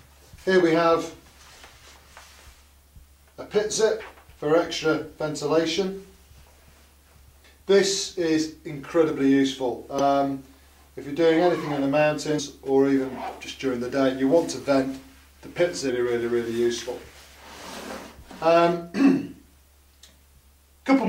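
Short blips at 4.00 to 4.02 s, 7.43 s, 9.99 s, 12.38 s and 15.88 to 15.90 s mark damaged data in a compressed stream: corrupted bytes make the decoder misread frames and lose sync, producing a brief glitch each time before decoding resumes.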